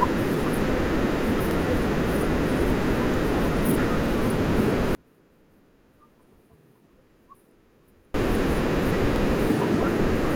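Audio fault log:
1.51–1.56 s, 4.06–4.11 s, 6.61–6.66 s and 9.16–9.21 s: overlapping chunks. At each join a 50 ms slice of the speech plays a second time, giving a brief stutter or click at the seam. The joins fall every 2.55 s, which fits 2.5 s blocks each starting 50 ms before the previous one ended. A dropout or buffer gap would remove sound at the join. Here sound is added: the same fragment is heard twice, so the spacing and the doubling mark it as overlap.
4.95–8.14 s: one channel inverted. The speech falls by about 35 dB and what remains is a faint copy, with the centred speech largely gone. This points to a polarity flip on one stereo channel, likely, with the two channels summed to mono so the common centre content cancels. A plain mute or level drop would keep the same tone at a lower volume. This residue has the character of channel differences instead.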